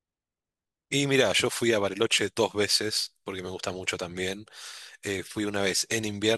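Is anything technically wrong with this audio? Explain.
Yes. At 2.14 s there's a repeated buffer: a 10 ms chunk of the speech plays twice because fresh audio arrived late, giving a quick click-like stutter.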